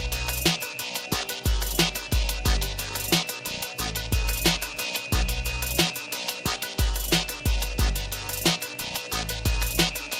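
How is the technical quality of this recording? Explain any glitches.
The technical quality of this recording is sound, with no glitches to explain.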